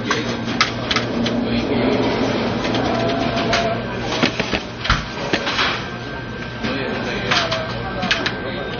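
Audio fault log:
Throughout: low-bitrate audio saved at a high bitrate. Nothing above 6.6 kHz, and the smeary, swirly texture points to an MP3 squeezed hard first, likely around 32 kbit/s, then re-saved higher.
0.70–3.30 s: doubled audio track. A second full-band copy trails by roughly 0.4 s at maybe 5 dB down, dry with no room tail, starting and stopping abruptly, likely an edit holding two out-of-step copies.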